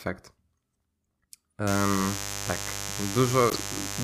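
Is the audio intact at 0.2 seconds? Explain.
Yes, the audio is intact at 0.2 seconds, with no fault audible at that moment.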